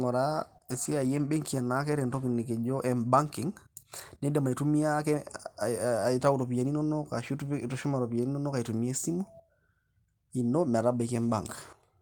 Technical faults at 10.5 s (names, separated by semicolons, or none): none